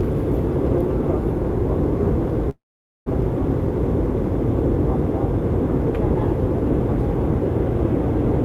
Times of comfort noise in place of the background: none

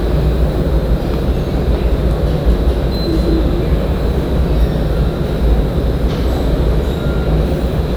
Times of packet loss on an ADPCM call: none

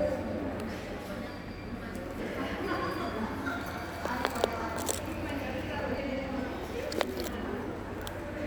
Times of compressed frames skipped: 2.18, 5.97

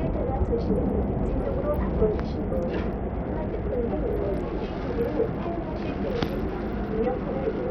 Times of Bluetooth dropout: none

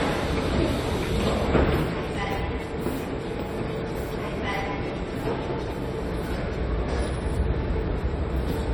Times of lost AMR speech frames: none

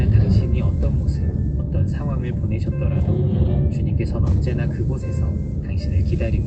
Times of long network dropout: none

